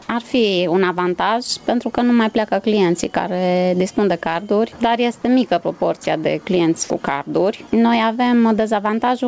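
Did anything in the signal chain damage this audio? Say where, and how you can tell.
Yes. Throughout the clip the level swings by around 10 dB. This is gain pumping, most likely from input gain set far too high, so a fast limiter or compressor clamps down on every peak.

At 6.04 s the sound drops out for about 20 ms and steady comfort noise takes its place. This is sound dropped by the voice detector in the call processing stage: the sender's detector likely classed that moment as background and stopped transmitting, so the receiver filled the gap.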